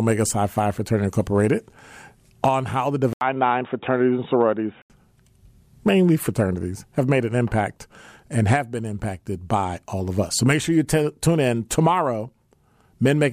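Speech, and right after "on how the" at 3.13 s there's a short gap of about 80 ms, then the sound goes dull and boxy until 4.9 s, with nothing above 3.8 kHz and a faint new noise sitting well under the voice. Loudness stays about the same, so it isn't a gain jump. That's the classic input switched to a poorer device, likely a hop to a narrower-band mic or headset call profile and back.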